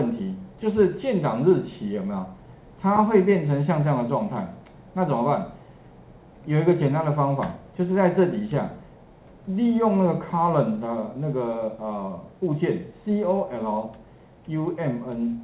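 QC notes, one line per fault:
Nothing to flag here; the audio comes through a call path with nothing above 4 kHz, which fits a narrowband G.711-style phone codec, and that is just how the line normally sounds.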